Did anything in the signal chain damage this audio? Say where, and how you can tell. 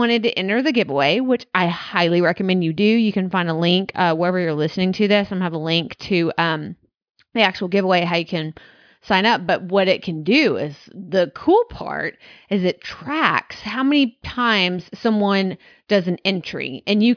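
No, nothing in the chain seems to have hurt this recording; it's intact all the way through, with nothing to point to at any stage.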